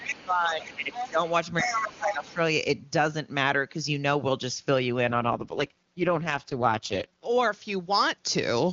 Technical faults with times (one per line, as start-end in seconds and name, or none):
0.00-0.25 other side's voice leaking through
0.00-1.21 speech suppressed in double talk
0.62-1.31 other side's voice leaking through
1.60-2.34 other side's voice leaking through
1.61-2.37 speech suppressed in double talk
5.08-7.26 AMR rate drop